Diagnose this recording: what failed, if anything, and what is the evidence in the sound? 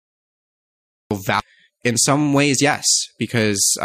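The fault is a cut-off start at the capture stage. The file holds digital silence up to 1.11 s. Speech then begins abruptly, mid-sound, with no attack or fade. Recording started late, so the opening of the utterance was never captured.

A CD skip occurs at 1.40 s, in disc playback. There is a mute of well under 10 ms. The speech then resumes from a different point. The laser jumped tracks on the spiral, moving the audio by whole disc turns.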